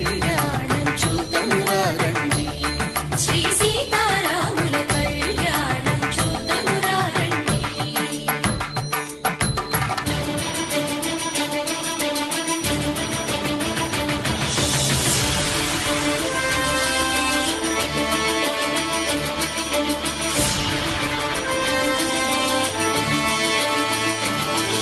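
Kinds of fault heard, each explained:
Nothing stood out on listening to this audio.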